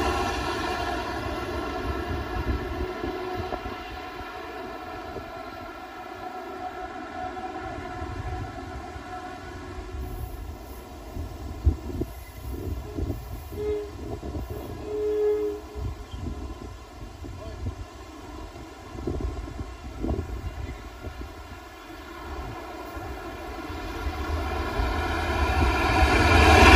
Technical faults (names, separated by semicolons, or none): channel delay (comb filtering)